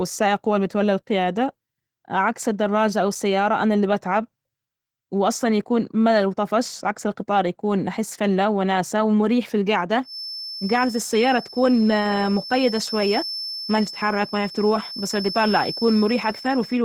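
Opus voice compression runs throughout: at 16 kbps in hybrid mode the speech excitation is coded coarsely in 20 ms frames, leaving plainly audible hoarse, slightly robotic roughness despite full bandwidth. A feedback whistle enters at 10.01 s and lasts to the end, a thin 5.3 kHz tone that swells and fades slowly, roughly 15 dB below the speech, likely from a loudspeaker-to-microphone loop held just short of runaway.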